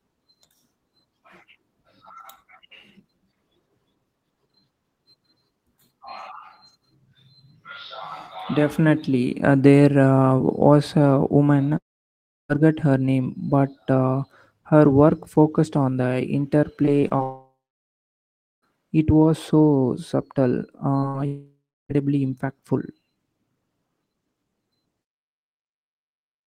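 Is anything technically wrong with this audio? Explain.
Yes. The speech is interrupted several times by network loss, ranging from tiny concealed holes to stretches where the sound goes silent.

Long network dropout, at 11.77 to 12.51 s, 17.23 to 18.64 s and 21.26 to 21.91 s. Roughly 0.72 s, 1.4 s and 0.64 s of audio are gone. Each time the last sound is stretched into a fading buzz or hiss, then falls to silence for about 0.68 s, 1.09 s and 0.32 s before speech resumes further along. The likely cause is the stream stopping altogether for those spans. What separates these from a burst of loss is the length and the real silence after the fill dies away.

Repeated packet loss (robotic sound), from 16.85 to 17.21 s, just before the second dropout. Four separate holes, the longest 22 ms and about 80 ms in total, are patched by continuing the previous sound. Together they make up about a fifth of that stretch. 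Because one patch follows another so quickly, the voice turns choppy rather than showing a single glitch. That repetition is what separates it from an isolated loss.

Short concealed packet loss, at 21.00 to 21.04 s. About 20 ms never arrived in time and was filled by extending the preceding sound, then blended back into the real signal. It comes across as a brief smear or wobble. Unlike the repeated loss, it is a single event, so nothing sounds robotic.

Burst of packet loss, at 21.08 to 21.16 s, sitting between the short loss and the third dropout. About 60 ms in a row was lost. The receiver held the last sound and faded it, so a voiced sound becomes a held buzz and other sounds a dimming hiss. Speech then picks up with that slice missing. It is longer than the loss at 21.00 s but never reaches the silence of a dropout.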